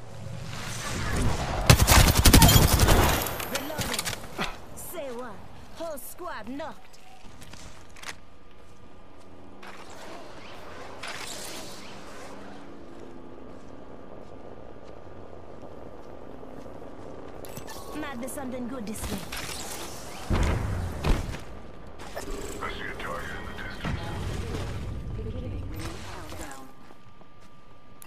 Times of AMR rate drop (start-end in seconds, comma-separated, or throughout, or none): none